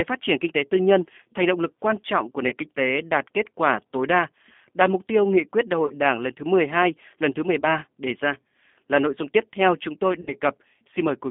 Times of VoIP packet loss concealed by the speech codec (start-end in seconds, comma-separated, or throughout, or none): 2.49-2.54, 5.87-5.94, 7.60-7.66, 10.21-10.33